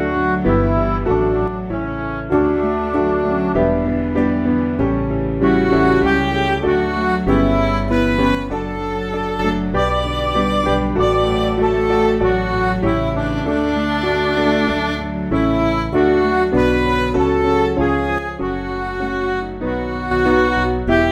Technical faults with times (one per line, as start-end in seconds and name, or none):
1.48-2.32 one channel drops out
8.35-9.39 one channel drops out
18.18-20.11 one channel drops out